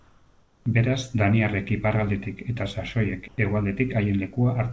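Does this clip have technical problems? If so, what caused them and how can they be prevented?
Yes. From 0.00 to 0.66 s, and again from 3.28 to 3.38 s, the background sounds like comfort noise in place of the real room sound. It is steady and featureless, and about 1 dB and about 3 dB quieter respectively. The likely cause is discontinuous transmission. The sender stopped sending audio in these pauses, and the receiver filled them with synthetic noise. Disabling discontinuous transmission on the sending side prevents it.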